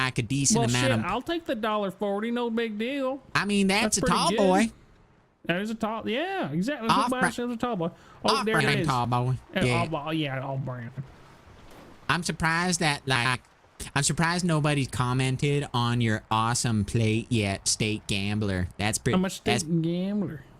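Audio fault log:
8.60–8.75 s, 10.88–11.08 s and 13.16–13.35 s: frames out of order. Two neighbouring chunks got swapped each time, about 69.7 ms each in the first and 92.9 ms in the other two. The stretch plays with its halves exchanged, giving a garbled flutter. Nothing goes missing.
9.05 s: block of digital silence. A 2.67 ms run of zeros drops in with no fade either side, which fits a 128-sample buffer not being filled in time. The hard cut out and back in comes across as a quick tick.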